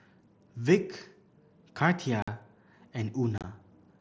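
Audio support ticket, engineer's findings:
Unconcealed Bluetooth headset packet loss at 2.22–2.28 s (about 52 ms hole) and 3.38–3.44 s (scattered gaps over 60 ms, longest 30 ms). Hard-edged dropouts on the mSBC headset link, consistent with several lost voice packets replaced by silence without concealment.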